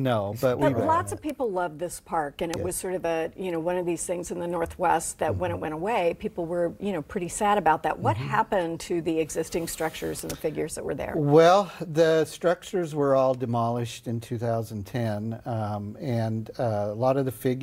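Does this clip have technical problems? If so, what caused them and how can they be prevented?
Yes: three bit error spikes, sharp ticks at 1.30 s (about -13 dBFS), 2.54 s (about -7 dBFS) and 10.19 s (about -13 dBFS). A flipped bit kicked one to three samples up by a power of two before they snapped back. Error-checked links and ECC memory would prevent this.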